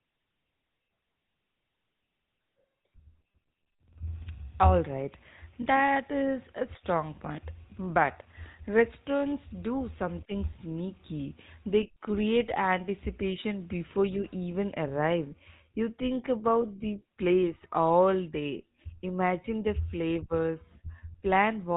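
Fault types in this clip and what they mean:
GSM full-rate codec: Throughout the speech, the plainly audible buzzy, gravelly roughness, which fits the 13 kbps GSM full-rate mode, comes from modelling the vocal tract and driving it with a sparse, regularly spaced pulse excitation that keeps only every third sample. Nothing passes above 4 kHz, so the spectrogram shows a hard empty band over that line and coarse, smeared harmonics below it.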